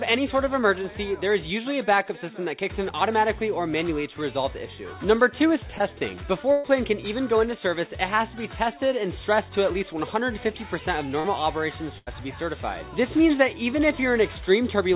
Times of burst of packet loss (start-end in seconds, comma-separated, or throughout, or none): 6.52-6.66, 11.98-12.15